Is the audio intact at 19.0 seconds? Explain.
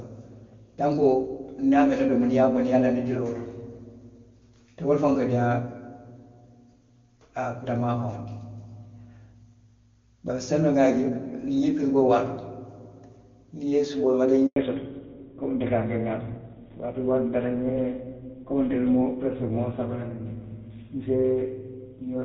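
No. At 19.0 s the clip is inside a fallback to narrowband that runs from 14.56 s to 22.24 s. The call has dropped from wideband HD Voice to a narrowband codec, likely GSM full rate, so the speech is band-limited to 4 kHz and sounds duller and rougher, losing its crisp sibilants. On a spectrogram, energy above 4 kHz stops abruptly at 14.56 s under a flat ceiling. The waveform shows little visible change.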